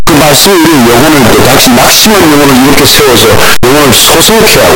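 From start to end the speech is buried in loud, harsh distortion, with soft sounds as loud as the rest. This is most likely a signed and unsigned mix-up in the 8-bit samples, so each zero crossing jumps full range. The spectrogram shows dense broadband energy throughout.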